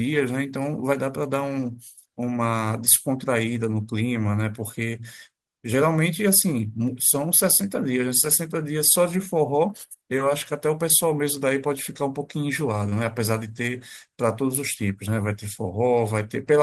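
At 12.89 to 12.93 s the speech has short concealed packet loss: 20 ms of audio failed to reach the decoder in time, so the receiver spliced in a 19 ms continuation of the preceding sound and blended back, heard as a brief smeared blip.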